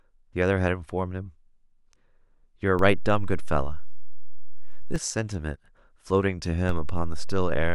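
Speech with two DC steps: the zero line jumps at 2.79 s by about -21 dBFS, returns at 4.96 s, then jumps again at 6.69 s by about -20 dBFS until the end. Each edge gives a low thump. The waveform shows the baseline shifted off centre, and the spectrogram shows brief vertical bands at the edges.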